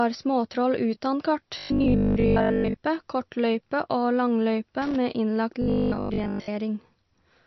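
Speech throughout, bandlimited with nothing above about 5.9 kHz, and with watery, swirling detail that points to MP3 compression, likely at a low bitrate such as 32 kbps. Just after "småtroll utan kart", from 1.58 to 2.78 s, and again from 5.62 to 6.50 s, the sound becomes a rigid metallic buzz at 50 Hz. This is robotic sound from repeated short buffers, likely 20 ms blocks being replayed in place of most of the real audio. From 4.82 to 4.96 s an irregular scratchy burst suggests loose connector crackle, where an intermittent contact chops the signal.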